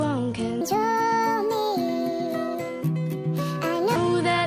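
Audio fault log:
0.61–3.96 s: wrong sample rate. Sound runs about 1.45 times fast and 6.45 semitones high, which fits 22 kHz material played at 32 kHz without conversion.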